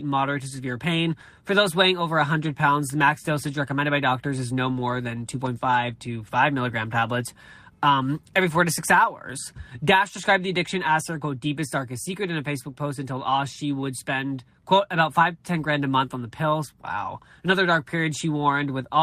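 From 4.67 to 4.81 s, just after "recommended by doctors is", the speech turns briefly rougher and grainier with no gap. This is a lost packet rebuilt from error correction: the missing audio, which fits roughly four packets, was filled from a low-bitrate copy carried in the following packet.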